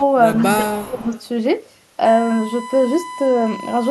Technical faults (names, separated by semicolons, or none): echo leak; speech suppressed in double talk; USB whine